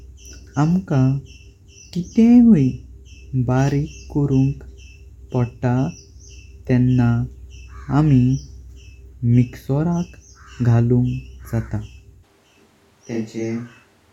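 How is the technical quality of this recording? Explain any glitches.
One glitch stands out. From 12.25 s to the end, the sound abruptly turns roomy and hollow, with thinner bass, a level drop of roughly 5 dB and room noise about 35 dB below the speech. This is likely a switch to a distant microphone: the close microphone's feed dropped out, so the rest is picked up farther away, capturing more reflections.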